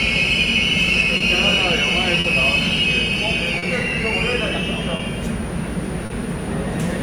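Clock drift between sender and receiver runs through the whole clip. The sender's clock runs roughly 3 percent slow, so the buffer keeps draining and timing hiccups recur.

Short stalls from a late packet follow at 1.17–1.22, 2.20–2.26, 3.58–3.64, 4.96–5.01 and 6.06–6.12 s. Each time the buffer empties, and the last sound is held for 30 to 40 ms before resuming with nothing lost.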